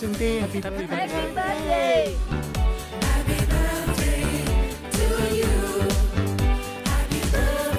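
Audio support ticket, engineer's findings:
No audible fault found; nothing to report for this ticket.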